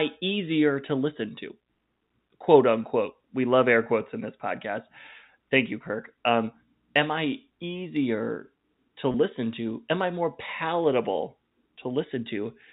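At 3.84 to 3.86 s, between "love air" and "in this podcast", and at 9.12 to 9.14 s, after "am I easier to", packet loss with pitch repetition bridges a 20 ms gap (which fits a single lost packet) by looping the last pitch period. Each sounds like a brief buzzy hold. The waveform shows repeated cycles, and the spectrogram shows harmonics running flat for that instant.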